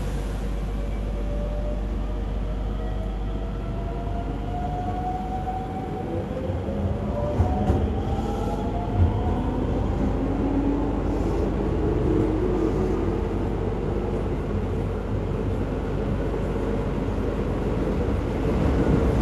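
No technical faults are audible anywhere in the recording.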